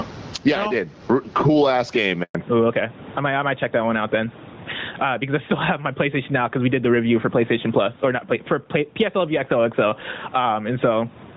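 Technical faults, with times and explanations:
Throughout, gain pumping: the level swings by roughly 20 dB. This is likely a capture gain set far too high with a fast limiter clamping it, which squashes loud and soft parts together.
2.23 to 2.35 s, handover gap: just after "cool ass game" the sound dies away and drops to silence for 120 ms. No speech frames arrived while the call switched networks, so whatever fell in that window is missing, not merely quiet.
2.35 to 11.36 s, fallback to narrowband: right after the gap the call drops from AMR-WB at 12.65 kbit/s to AMR-NB at 12.2 kbit/s. Nothing above 4 kHz survives from here to the end, so sibilants lose their edge and the speech turns duller and rougher.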